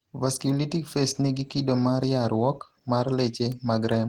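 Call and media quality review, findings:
Opus voice compression, whole clip: speech muffled, hoarse, faintly robotic. Hybrid SILK plus CELT coding, with coarse excitation consistent with a low bitrate near 16 kbps. Spectrogram: fullband but thin, smeared energy in the high layer with blocky frame-to-frame texture.

Bit error spike, 3.52 s: single sharp tick, unrelated to the speech. Likely a flipped bit in memory or on a digital link, corrupting one sample. Waveform: lone one-sample spike jumping away and straight back. Spectrogram: thin vertical line across all frequencies.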